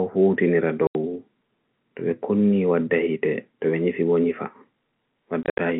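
Packet loss filled with silence cuts an 80 ms hole at 0.87 to 0.95 s, consistent with 10 ms packets, and 120 ms of gaps scattered from 5.43 to 5.59 s, longest 70 ms. The missing audio becomes dead silence with abrupt edges over the narrow telephone-band G.711 sound.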